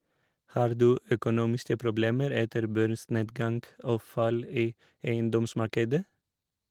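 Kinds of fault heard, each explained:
Nothing to list here, since no faults turn up anywhere in this bit of speech.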